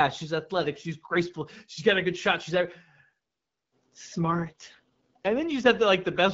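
Speech carried over an AMR wideband (HD Voice) link, with light codec colouring throughout, turns rough, raspy and synthetic from 4.30 s to 5.32 s, with no gap and no narrowing of the band, before clearing again. This is an AMR rate drop. A weakening radio link forces the codec down to a lower mode so that more bits go to error protection. The roughness fits a step from 12.65 kbit/s to 6.6 kbit/s.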